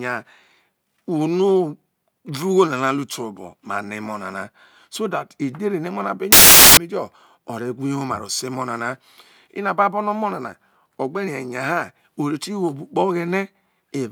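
A speech clip with one clear fault: from 6.32 to 6.77 s the samples are built from the wrong bytes. The reader is misaligning or swapping byte order, so the jittery low bits end up as the big part of each value. You hear a burst of loud, harsh broadband noise across that stretch instead of the speech.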